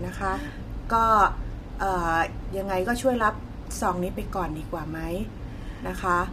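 From start to finish the speech sounds rough and grainy, with plainly audible smearing around the voice's harmonics. This is likely low-delay AAC compression (AAC-ELD), whose short frames resolve pitch poorly and, at a rate fitting roughly 32 kbps, leave too few bits.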